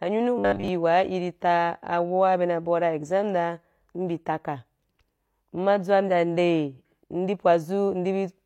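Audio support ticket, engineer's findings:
Robotic sound from repeated short buffers, 0.38–0.68 s: rigid 100 Hz metallic buzz; likely buffer underrun looping about 10 ms. Spectrogram shows 100 Hz harmonic comb; waveform shows repeating cycles across about 70% of the span.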